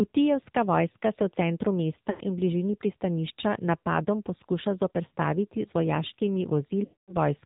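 Throughout, the speech carries AMR narrowband mobile codec damage: nothing above 4 kHz, a hard spectrogram ceiling, and a plainly buzzy, synthetic quality that points to a low mode near 7.4 kbps.

From 2.10 to 2.21 s, lost AMR speech frames make the decoder repeat the last pitch and vocal tract settings with falling gain. The sound smears and fades, showing as a stretched, dimming band in the spectrogram, which fits about 100 ms of missing frames.

From 6.84 to 7.14 s, a longer run of about 240 ms drags out and decays to silence, appearing as a flat waveform gap before the speech returns weak.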